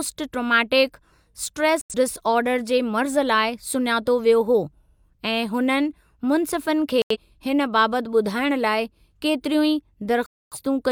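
Speech with three digital broadcast dropouts: muted holes at 1.81–1.94 s (just before "डिसऑर्डर जे"), 7.02–7.17 s, and a longer one at 10.26–10.58 s. The first two fit two lost frames and the third about six, where the receiver silenced undecodable data rather than concealing or garbling it.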